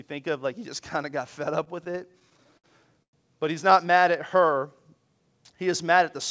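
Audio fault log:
1.64–2.67 s, repeated stalls (stutter): about a dozen short hold-ups break the flow, the longest about 61 ms, with roughly 189 ms of stretched-out sound in all, close to a fifth of the span. Packets were reaching the receiver later than they were being played, so the jitter buffer kept running dry and the decoder extended the last sound to cover each wait. Nothing is lost, but the audio lurches and drags through this stretch.
3.03–3.16 s, call audio freeze: the sound halts for about 103 ms, with a brief continuation of the last sound decaying into roughly 90 ms of silence before the audio resumes where it left off. The likely cause is a burst of delayed packets emptying the jitter buffer. The receiver then raised its playout delay by about the same 103 ms, so a gap is inserted rather than audio being dropped.
3.92–4.80 s, jitter buffer slow-down: playback runs at about 93% speed with the pitch unchanged, adding about 66 ms. 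The receiver is rebuilding its reserve by repeating individual pitch periods and fragments of pauses several times over. Sounds in this stretch are drawn out. Throughout the clip the call path shows nothing above 8 kHz, which fits a wideband codec such as G.722.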